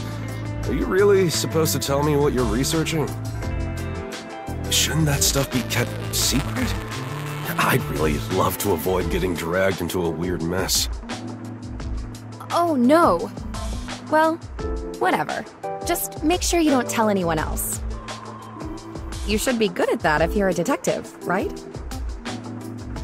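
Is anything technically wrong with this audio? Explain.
Yes, there is buffer tearing from 5.12 to 7.62 s. The writing program and the playback hardware have drifted so their positions cross within each buffer. A small slice of every period replays audio about a hundredth of a second old, joined by hard edges. This makes a steady robotic buzz at about 188 Hz, which fits a 256-sample buffer. That strictly regular rate is what separates it from random clicks or dropouts.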